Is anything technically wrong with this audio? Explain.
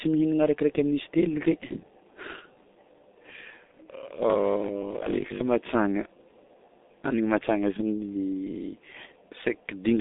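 Yes, there are two faults. Throughout the clip the speech carries G.723.1 codec damage: nothing reaches above 3.8 kHz, and the heavy, muffled, hoarse quality with smeared consonants fits a G.723.1 stream near 6 kbit/s, whose 30 ms frames and slow voice model cannot track fast changes.

From 4.30 to 5.44 s the speech turns into a rigid metallic buzz at 50 Hz that loosely follows the syllables. This is robotic sound, likely from repeated short buffers: audio arrives too slowly, so playback loops a 20 ms chunk and skips most of the real material in that span.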